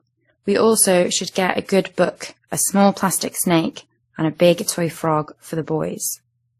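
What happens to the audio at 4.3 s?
At 4.3 s the speech carries layered artefacts with nothing above 15.2 kHz, likely transcoding between lossy codecs: each re-encode adds smearing atop earlier damage throughout the clip.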